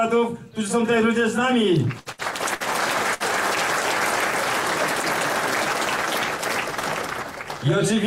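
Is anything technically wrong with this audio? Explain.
Yes, there's a cluster of burst packet loss early on, at 1.99–2.09 s, 2.12–2.22 s, 2.55–2.63 s and 3.14–3.23 s. Each time, a run of packets went missing, so the receiver stretched the last bit of sound for roughly 55 to 66 ms while fading it down. That gives a brief held buzz or fading hiss. Playback then picks up about 60 ms further on, so a short slice of audio is simply skipped each time.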